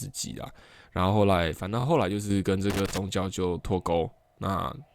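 From 1.57 to 2.30 s, one stereo channel likely drops out; once the two channels are summed to mono, the speech falls abruptly by about 6 dB until it returns. Within that span, repeated frames cause a stutter from 1.79 to 1.84 s: a 23.2 ms block is played two extra times, which adds 46.4 ms. From 2.70 to 2.98 s, a loose connector crackle occurs as a worn contact makes and breaks, chopping the signal into an irregular burst of scratchy crackle. Repeated frames return from 4.25 to 4.34 s, where a 46.4 ms block plays twice more, stuttering again and adding 92.9 ms.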